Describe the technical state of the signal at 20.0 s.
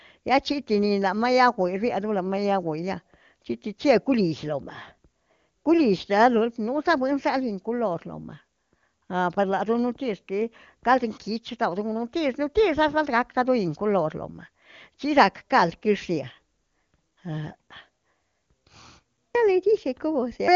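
At 20.0 s the speech is intact, passing through the AMR wideband (HD Voice) codec at 23.85 kbit/s with no fault at that moment.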